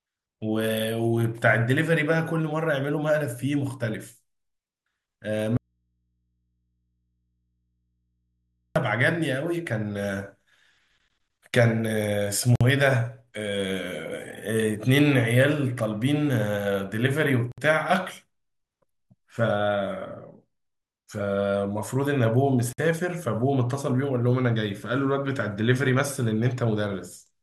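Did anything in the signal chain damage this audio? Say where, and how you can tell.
Yes. From 5.57 to 8.76 s the speech cuts out abruptly for about 3.2 s, leaving an audio dropout to a faint residue: only mains hum, roughly 50 dB below the signal. A live path with hum points likely to an analogue wiring break leaving the input open.

Three gaps at joins of encoded pieces appear at 12.56 s (52 ms), 17.52 s (60 ms) and 22.73 s (55 ms). The speech stops with smeared edges and resumes where it left off. Separately encoded segments were concatenated with encoder delay and final-frame padding left in.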